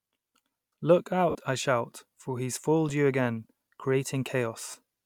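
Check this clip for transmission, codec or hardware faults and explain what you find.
The clip has lost LE Audio frames at 1.30–1.35 s, 2.89 s and 4.71–4.74 s, gaps of 50, 10 and 30 ms that fit whole 10 ms frames. The LC3 decoder refills each gap with the last spectrum under random signs, so the speech smears into brief noisy hiss rather than dropping to silence or clicking.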